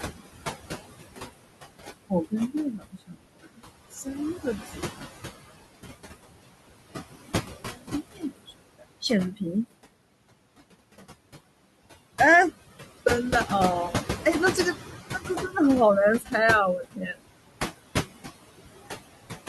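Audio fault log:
Throughout: noise suppressor artifacts. The suppressor treats the steady room noise, about 10 dB under the speech, as something to remove and cuts it by about 18 dB between phrases. The background sinks in the gaps and swells back under speech.
2.72–3.61 s, 8.12–8.53 s, 16.84–17.21 s: speech cut by the noise suppressor. Soft stretches of speech were classed as noise and pulled down with the background by up to about 21 dB, 21 dB and 19 dB. Roughly half a second, a fifth of a second and 0.15 s in total sound swallowed or faint.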